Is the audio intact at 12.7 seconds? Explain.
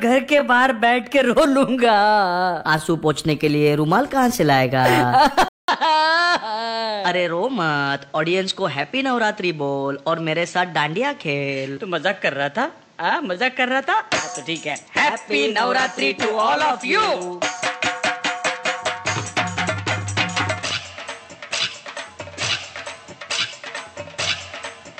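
No. From 5.48 s to the end, the sound is dull, band-limited to 8.2 kHz, quieter and with new background noise about 35 dB below the signal after a 200 ms gap, likely an input switched to a poorer device.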